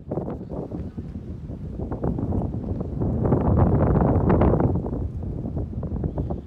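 No technical faults can be heard anywhere in the audio. There is nothing in it that calls for a timestamp or a closer listen.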